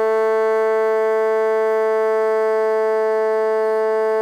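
A music clip, and nothing in it is technically wrong.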